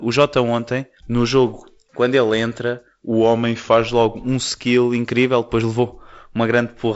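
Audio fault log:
3.11 to 3.88 s, drift correction step: the audio suddenly slows by about 6.3% and drops 112 cents, just over a semitone, then snaps back to normal speed and pitch. It's likely a clock-matching resampler that briefly cut its playback rate to let its buffer refill.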